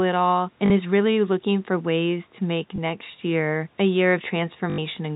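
Packet loss with the last packet repeated occurs three times: 0.66–0.70 s, 2.76–2.78 s and 4.70–4.78 s. Each gap is filled by replaying the previous chunk, which fits 20 ms packets. The 80 ms run buzzes at 50 Hz, a brief robotic stutter.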